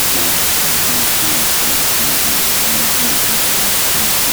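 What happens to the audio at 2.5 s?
Wrong sample width, across the whole clip including 2.5 s: 32-bit samples read as 16-bit split into noisy halves, burying the speech in loud noise at half speed, an octave low.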